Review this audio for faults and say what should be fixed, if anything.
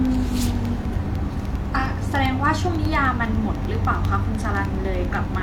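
Regular ticks run through the speech every 0.1 s from 0.05 to 5.35 s. These are periodic USB or driver dropouts, tiny silent gaps well under a millisecond. Prevent this by stopping the background task that stalls the USB bus or driver.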